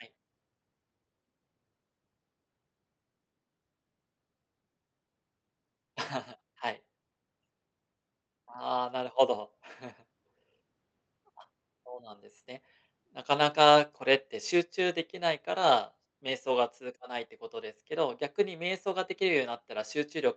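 From 8.48 to 9.21 s there is an automatic gain rising. The gain control judged the input too quiet. It pushed its gain up by about 3 dB. The speech and the background noise swell together. The rise is quick, under a second.

From 13.58 to 16.77 s comes an automatic gain falling. The control decided the input was too loud, or its background noise too strong. It eased its gain down by about 4 dB over roughly three seconds. The speech starts loud, then sinks. The background drops with it. Through the whole clip the call path's Opus coding stops near 8 kHz, so the upper highs are missing.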